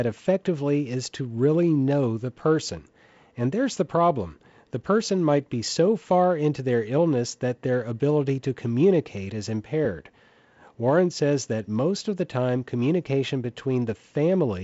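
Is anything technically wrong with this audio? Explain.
No, nothing is technically wrong.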